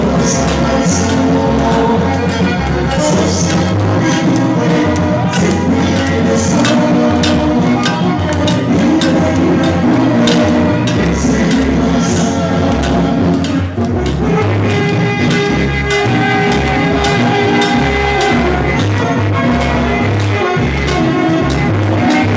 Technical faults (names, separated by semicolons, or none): none